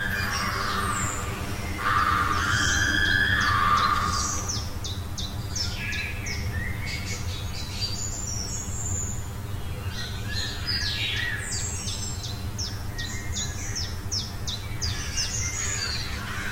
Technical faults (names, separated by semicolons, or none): channel delay (comb filtering)